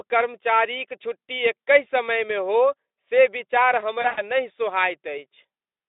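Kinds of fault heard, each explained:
VoIP packet loss concealed by the speech codec: after "हो से विचार", 4.01–4.22 s smears into a fading buzzy tone or coloured noise as the decoder extrapolates over roughly 120 ms of missing packets.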